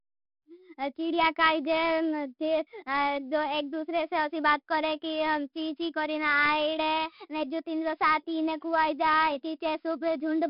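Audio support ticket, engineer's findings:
4-bit ADPCM compression, whole clip, 0 s to end. Gritty hiss riding on the speech, rising and falling with level; harsh smearing on sharp onsets where step size lags. Heavy damage, fits about 44 kbps. Hard ceiling at 5.3 kHz, pointing to a sample rate near 11 kHz. Spectrogram: broadband noise floor tracking each syllable, nothing above 5.3 kHz. Waveform: jagged edges on attacks.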